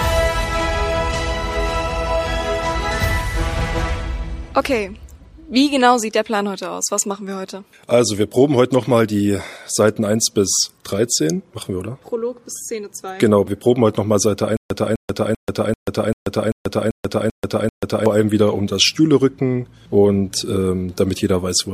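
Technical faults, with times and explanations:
14.57–18.06 s, stutter with silent gaps: a 254 ms burst repeats nine times, each followed by 136 ms of digital silence, likely a stalled stream replaying its last fragment.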